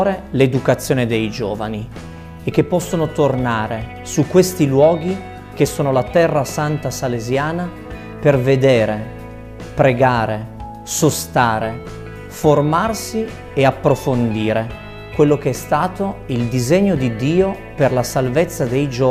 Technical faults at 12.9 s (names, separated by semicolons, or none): none